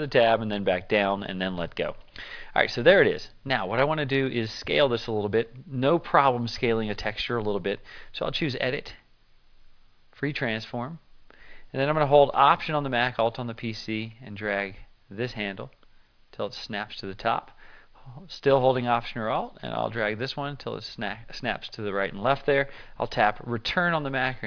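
Listening through the whole recording, nothing stood out as a technical problem at any point.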